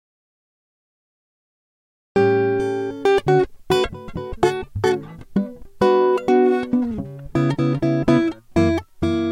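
The music opens in an audio dropout to silence: from the very start until 2.16 s there is nothing at all, not even room tone, before the music enters abruptly mid-flow. On a waveform this reads as a flat line followed by a sudden signal; a spectrogram shows a blank, empty band across every frequency up to 2.16 s. The likely cause is a lost input, such as a disconnected source or a mute, while recording continued writing silence.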